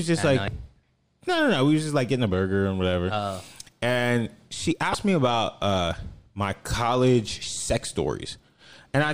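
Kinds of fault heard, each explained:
Damaged data in a compressed stream: Part of the encoded speech stream is corrupt, so the decoder misreads those frames, loses sync and hunts for the next valid frame header. The result is a short glitch that does not belong to the speech. It occurs twice, about 30 ms each. The first is at 0.45 to 0.48 s. The second is at 4.91 to 4.95 s, between "and she" and "me about uh my".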